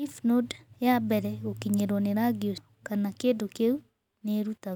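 Compressed frames skipped at 2.58 s: a run of frames in the encoded speech stream never reached the output, so the audio jumps forward about a fifth of a second, consistent with several 32 ms frames lost.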